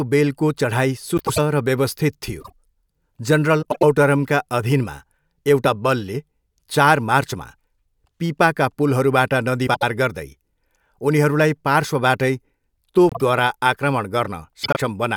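Frames out of order occur at 1.17–1.38 s, 2.40–2.52 s, 3.62–3.83 s, 9.67–9.83 s, 13.09–13.21 s and 14.63–14.77 s. In each, two adjacent blocks of the speech were decoded in swapped sequence, each block lasting 96, 48, 96, 72, 48 and 48 ms respectively. Each stretch plays back-to-front by halves, giving a brief garbled flutter, while the overall timing stays intact.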